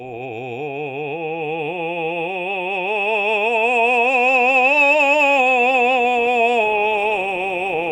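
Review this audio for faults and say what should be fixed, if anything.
Nothing needs fixing, as the music signal stays continuous with no audible technical defects.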